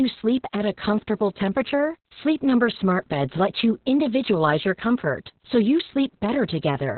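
Muffled, hoarse, slightly robotic speech throughout, with nothing above 4.3 kHz: heavy Opus voice compression, its SILK coder squeezed to narrowband at a very low bitrate.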